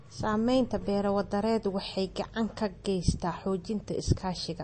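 Throughout this speech clip the audio carries plainly audible MP3 compression, likely from a low-bitrate encode around 32 kbps: nothing sounds above about 8.4 kHz, and the remaining detail has a watery, swirling quality where weak frequency components flicker on and off, unlike a plain low-pass filter's clean dullness.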